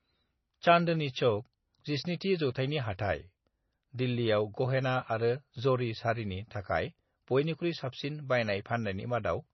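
Throughout the speech, the top end stops dead at about 5.9 kHz and the sound turns watery and swirly, with smeared s sounds: heavy damage likely from MP3 compression at a low bitrate near 24 kbps. A spectrogram shows a flat ceiling and flickering, patchy gaps below it.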